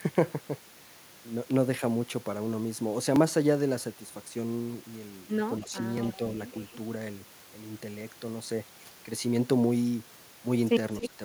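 At 5.6 to 5.71 s the speech dips by about 10 dB for roughly a tenth of a second. This is speech suppressed in double talk. It is likely an echo canceller turning the talker down while the far side also spoke. At 6.05 to 6.18 s a faint, delayed copy of the voice appears 278 ms late, far below the speech. This is echo leak, likely loudspeaker sound the canceller failed to remove. At 10.94 to 11.08 s the echo leak returns 280 ms late, now nearly as loud as the speech, again likely uncancelled loudspeaker pickup. From 11.01 to 11.19 s the voice drops again, by about 15 dB. This is likely speech suppressed in double talk once more.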